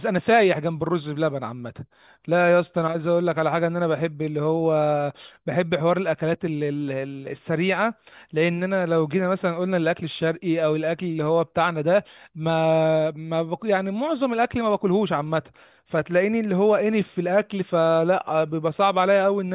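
Nothing stood out on listening to this speech recording.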